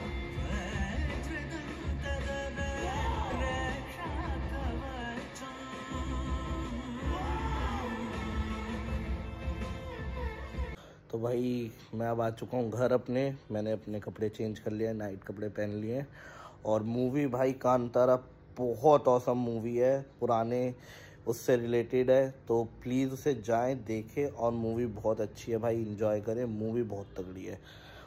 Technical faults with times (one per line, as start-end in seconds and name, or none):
none